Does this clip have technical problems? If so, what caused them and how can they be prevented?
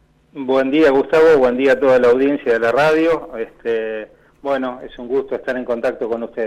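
No, nothing stood out as a technical problem on listening, so there is nothing here that needs preventing.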